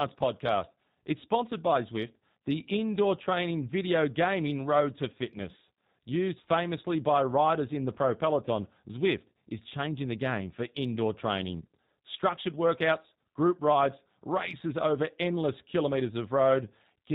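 From start to finish the speech carries plainly audible G.729 codec damage. The coder models each 10 ms frame as a vocal tract filter driven by a pitch predictor and a few sparse pulses, so the voice comes out slightly rough and synthetic, with a buzzy, thinned texture. Nothing above 4 kHz survives, which dulls sibilants and removes air. The coarseness fits the 8 kbit/s G.729A variant.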